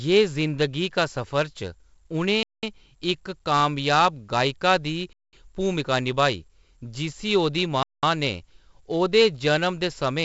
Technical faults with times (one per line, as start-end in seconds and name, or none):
0.00-10.25 4-bit ADPCM compression
2.43-2.63 gap between chunks
5.13-5.33 gap between chunks
7.83-8.03 gap between chunks